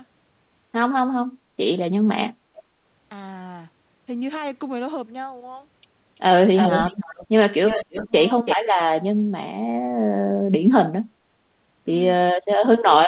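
Echo leak at 2.56–2.62 s is a very faint copy of the speech trailing it by 335 ms. It returns much louder, nearly at speech level, at 6.55–7.27 s, and somewhat quieter at 7.66–8.07 s. Likely the far end's loudspeaker fed its microphone and its echo canceller let part through.

Speech suppressed in double talk follows at 8.05–8.13 s as a brief dip of about 15 dB. The echo leak then recurs, again nearly as loud as the speech, at 8.45–8.57 s.

Double-talk suppression returns at 12.26–12.65 s as a deep cut lasting about 400 ms, and at 12.81–12.87 s as another short dip. Likely the canceller could not separate talker from echo while both sides spoke, and turned both down.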